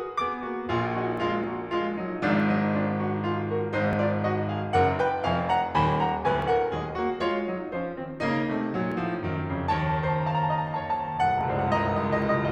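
Music with brief skips at 1.44, 3.93, 6.42, 8.92 and 11.41 s, each losing a few milliseconds, likely audio missing between chunks; the even 2.5 s spacing and the gapless joins, rather than silences, set it apart from random dropouts.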